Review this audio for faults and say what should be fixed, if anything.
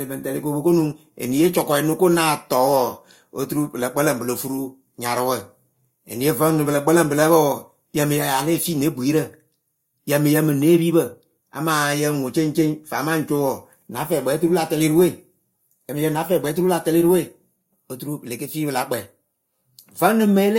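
No faults turn up in this audio, so nothing needs to be fixed.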